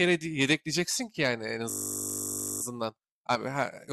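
From 1.70 s to 2.62 s the speech gives way to a system hang loop: the machine stalled while the sound hardware kept replaying one 20 ms slice of its ring buffer, about 46 times over. At 50 repeats per second this merges into a steady, flat buzz. Unlike mains hum, the buzz carries the timbre of the frozen fragment. Unlike a dropout or stutter, there is no silence, and the speech resumes with essentially nothing skipped.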